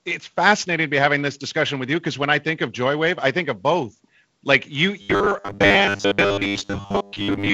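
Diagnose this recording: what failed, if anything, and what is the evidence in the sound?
The buffer stage failed from 5.02 s to the end of the clip at 7.53 s, most likely because fresh audio stopped arriving on time and the software filled the gaps by replaying the last short block. From there the speech becomes robotic, a rigid metallic buzz locked at 100 Hz that only loosely follows the words. That pitch points to a repeated segment of about 10 ms. Most of the stretch is repeated material, so much of the real audio is skipped.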